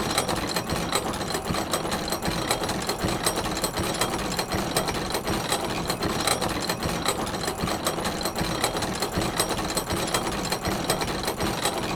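No technical faults are audible.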